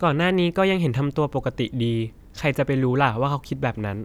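No faults can be heard anywhere in the recording.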